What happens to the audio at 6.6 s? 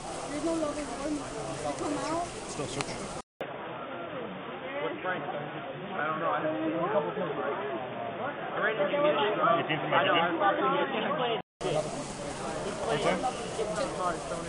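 The input likely switched to a poorer, narrower-band device from 3.21 to 11.61 s. At 6.6 s nothing above 3.6 kHz remains, so the sound is dull and boxy over a faint new noise floor at a similar level, following a 200 ms silence at the switch.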